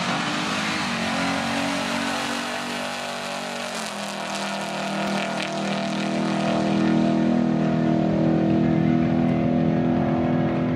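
Chunks out of order at 5.07 s: one 5.33 ms chunk plays a chunk late, swapping places with its neighbour and leaving three hard joins, heard as a tiny jumbled moment.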